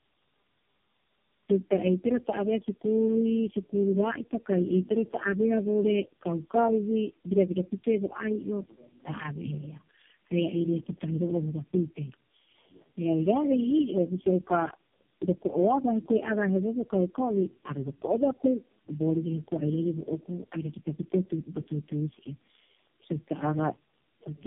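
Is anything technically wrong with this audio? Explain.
Yes. Throughout the clip, the speech sounds rough, muffled and warbly, with nothing above 3.3 kHz. This is tandem speech coding: the audio was decoded and re-encoded through four low-rate speech codecs in a row, and the character points to AMR-NB. Each stage compounded the last one's damage.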